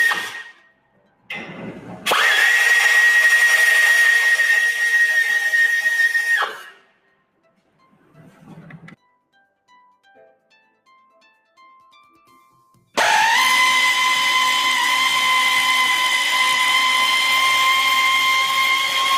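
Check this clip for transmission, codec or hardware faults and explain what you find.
A speech-oriented processing fault is present rather than a transmission or hardware one. The main problem is a noise suppressor applied to music or sounds, with two stretches where the suppressor turned the sound down harder.

The noise suppressor applied to music or sounds acts for the whole clip. A suppressor tuned for speech treats anything steady or decaying as background noise and pulls its gain down, while sharp onsets pass largely intact. Here the attenuation swings by around 15 dB, so sustained material and tails keep sinking and recovering, giving a pumping, fluttering, thinned-out texture instead of a stable level.

Sound cut by the noise suppressor occurs from 0.44 to 1.3 s and again from 6.48 to 10.88 s. In these spans the suppressor classified the sound itself as noise and clamped down harder than elsewhere, reaching a drop of about 19 dB. 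The effect covers about a second in the first span and roughly four seconds in the second. Held parts fall away sharply and decays are truncated, while transients still punch through.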